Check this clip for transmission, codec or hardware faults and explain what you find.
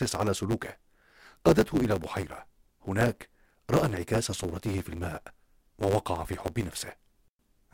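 One fault runs through the whole clip: a block size mismatch (truncated). Each block is written longer than the next stage reads, so the tail of every block is discarded. The cuts recur 100 times per second, producing a steady 100 Hz buzz, and the speech runs about 1.09 times fast. A sample-rate error would change the timbre along with the speed, but here the timbre stays.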